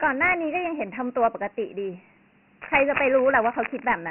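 A short speech clip, heavily damaged by Dialogic VOX ADPCM coding throughout. The sound is band-limited, with nothing above about 2.9 kHz and thin low end. A gritty hiss trails the speech. The coarse 4-bit steps fit a 24 kbps, 6,000-sample stream. From 2.62 to 3.88 s, cable scratch noise appears. Dense, uneven bursts of scratching and rustling sit over the speech, nearly as loud as it. A worn cable, connector or control being moved is the likely cause.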